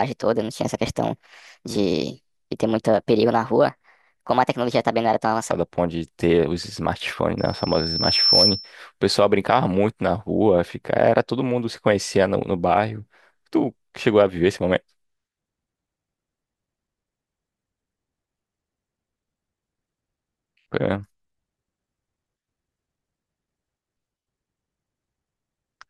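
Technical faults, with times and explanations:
0.00 to 5.51 s, section at the wrong speed: the speech runs about 1.28 times too fast, so it sounds hurried and chipmunk-like, raised by about four semitones, before snapping back to natural pace and pitch. The likely cause is playback or editing against the wrong clock, which shifts timing and pitch together. On a spectrogram, harmonics and formants in this stretch sit noticeably higher and syllables look compressed in time compared with the rest.
7.38 to 8.74 s, loudspeaker feedback squeal: a pure tone at 5.4 kHz swells over roughly a second until it stands about 5 dB above the speech, then stops. The microphone was hearing its own loudspeaker, and at this frequency the loop gain went above one, so the tone kept reinforcing itself. A spectrogram shows a single bright horizontal line at 5.4 kHz growing steadily stronger, and the waveform's envelope rises with it.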